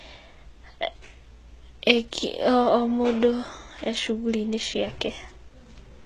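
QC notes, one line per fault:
Throughout, HE-AAC compression: the speech treble sounds bright but synthetic, stops at 14.4 kHz, and s sounds turn gritty and lispy. The likely cause is spectral band replication patching upper bands from copied lower ones with misaligned harmonics, which fits roughly 16 kbps.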